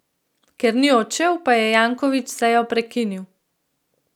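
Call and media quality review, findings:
Nothing stood out on listening to the speech in this call recording, and no findings are raised for the ticket.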